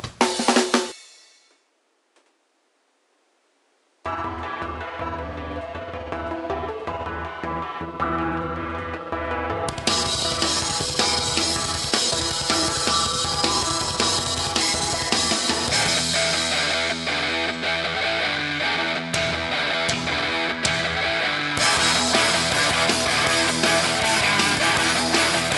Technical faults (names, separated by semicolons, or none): compressed frames skipped